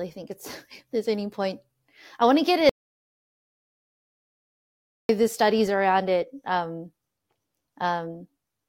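Speech, with one audio dropout to silence. After "I want to get", the sound stops dead at 2.69 s. It returns at 5.09 s, starting on "the studies around it". The gap lasts about 2.4 s. It is total silence, with no room tone underneath. Whatever was said in that span is missing. The likely cause is a lost input, such as a disconnected device, a failed link or an accidental mute, while recording carried on writing silence.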